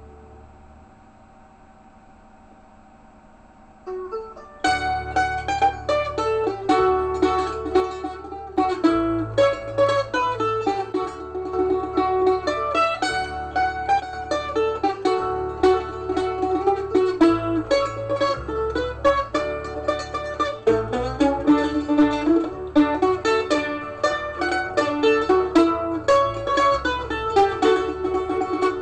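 At 7.80 to 8.57 s, 10.92 to 11.53 s and 14.00 to 14.13 s the level drops abruptly by about 6 dB and then snaps back, the likely sign of one channel dropping out before the mono sum. Each drop is a clean step rather than a fade, and the audio never falls to silence. That distinguishes it from a full dropout or a gain ride. Anything carried only by the lost side vanishes during each gap.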